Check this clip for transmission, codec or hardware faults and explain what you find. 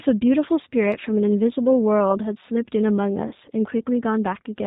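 Two faults are audible: coding damage across the whole clip and two brief dropouts.

Throughout, the speech is band-limited, slightly rough and synthetic, with nothing above 4 kHz. This is the G.729 codec, which points to an 8 kbit/s VoIP link. It rebuilds each 10 ms frame from a vocal tract filter, a pitch predictor and a few pulses instead of the true waveform.

At 0.65 to 0.67 s and again at 3.28 to 3.32 s, the speech briefly smears into a buzzy tone or coloured noise that fades, and the second event is longer. This is VoIP packet loss concealed by the speech codec. The gaps fit about 10 ms and 30 ms of lost audio. The decoder stretched its last pitch and filter and lowered the gain to fill each gap.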